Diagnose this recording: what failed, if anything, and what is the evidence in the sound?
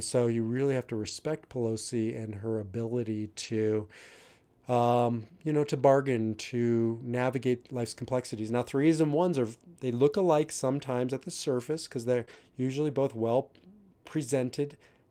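Network packets were lost on the way to the Opus decoder, but the packet after each loss carried a low-bitrate in-band error-correction copy, and the decoder played that copy, so there is no gap. Each rebuilt stretch sounds rougher and noisier: about 80 ms at 0.95–1.09 s and 3.39–3.53 s, a brief patch at 6.07 s, about 20 ms at 12.21–12.23 s, and about 40 ms at 12.29–12.35 s. These are lost packets rebuilt from error correction.

Also at the network stage, a short concealed packet loss hit at 12.25–12.29 s, between two of those rebuilt patches. About 20 ms of speech arrived too late to decode and had no error-correction copy. The receiver filled the hole by continuing the preceding sound, pitched if voiced and shaped noise if not, then blended back into the real signal. It is heard as a brief smear or wobble in the speech.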